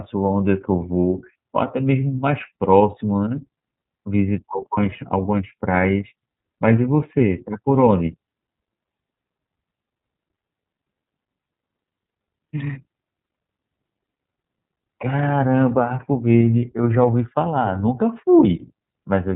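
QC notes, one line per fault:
Throughout, iLBC codec: the speech passes through a narrowband codec that codes each frame's excitation independently, consistent with 30 ms frames at about 13.3 kbps, so nothing above 4 kHz survives and the speech sounds muffled, rough and synthetic.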